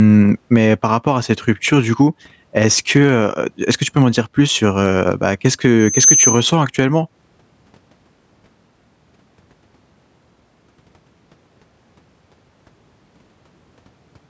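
A speech recording with gain pumping throughout, with a gain swing of roughly 10 dB. That pattern points to input gain set far too high, likely with a fast limiter or compressor clamping down on every peak and squashing loud and quiet passages toward one level.

From 5.79 to 6.52 s there is a loudspeaker feedback squeal. A single tone at 6.2 kHz grows on its own over about a third of a second and reaches roughly 5 dB above the speech. This happens when the microphone picks up the loudspeaker it feeds and the loop gain at that frequency exceeds one. What separates it from steady tonal interference is that steady build-up: a hum or whine sits at a fixed level, while feedback keeps feeding on itself until the loop breaks. The tone stays inside the call's normal bandwidth, which tops out at 8 kHz.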